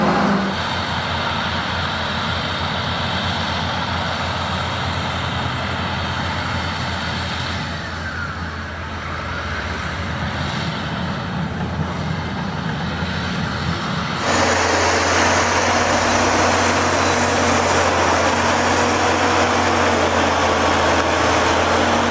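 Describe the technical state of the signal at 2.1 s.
Gain pumping is present at 2.1 s, as it is across the whole clip: the gain swings by roughly 10 dB, pulled down under every loud sound. The likely cause is gain set far too high, with a fast limiter clamping each peak.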